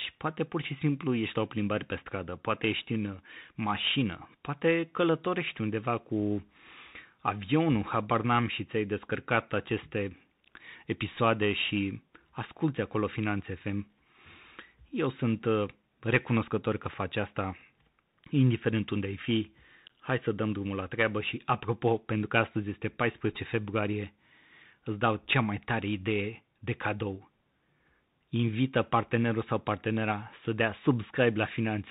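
From start to finish the speech passes through a Bluetooth CVSD headset codec, and the damage is plainly audible. The sound points to CVSD at 64 kbps. Each sample is coded as one bit saying up or down. The step size adapts as it goes. Nothing above 4 kHz survives, so the speech is narrowband and muffled. Sharp, loud high sounds outrun the step and distort. S sounds turn scratchy. A granular hiss sits under the speech. Faint room noise lies about 48 dB below the speech.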